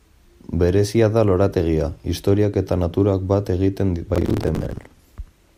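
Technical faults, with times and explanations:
4.15 to 4.99 s, processor overload crackle: the speech turns gritty and torn for most of a second as the processor repeatedly misses its buffer deadlines. Each miss replays a scrap of stale audio with abrupt edges. The roughly 10 ms spacing points to small buffers, and many deadlines were missed in a row. On a waveform, the stretch shows jagged discontinuities and repeated chunks. A spectrogram shows dense vertical broadband streaks across it, stopping once the load eases.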